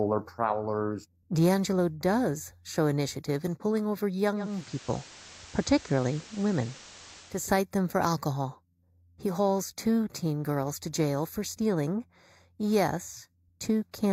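Speech throughout has a hollow, slightly dull character with a fixed gap in the upper mids. That is channel delay comb filtering: one channel runs late by only a fraction of a millisecond, and when the two are summed to mono, the shared content cancels at evenly spaced frequencies, with the first notch around 3 kHz. From 4.34 s, just after "initiative in pulling over", a soft hiss rises and the level shifts by about 2 dB. This continues until 7.51 s, returning just before "them for alcohol". That is digital radio blending to analogue: the receiver lost the digital stream and cross-faded over roughly 0.35 s to the station's FM broadcast, whose hiss sits around 20 dB under the speech, then faded back.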